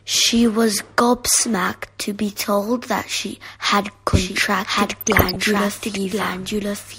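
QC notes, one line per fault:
4.13 s to the end: doubled audio track. From here a second copy of the speech sits under the original, trailing by roughly a second and about 5 dB quieter. It's a clean, full-band duplicate with no decay or room colour, and it cuts in abruptly rather than building like an echo. That points to the audio likely being picked up a second time through a slower path, or two out-of-step copies left in an edit.
4.90 to 5.36 s: DAB burbling. For about half a second short blips of noise appear in single frequency bands over the speech. This is weak DAB reception letting bit errors, at an error rate of around half a percent, slip past correction into the MP2 data, corrupting samples across 20 frames.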